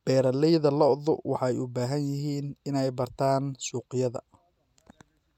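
No technical faults can be heard anywhere in this recording.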